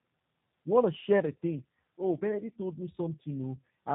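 Throughout, the speech sounds rough, muffled and warbly, with nothing above 3.8 kHz: tandem speech coding, where CVSD-coded audio was decoded, passed through G.711, then recoded with G.729A.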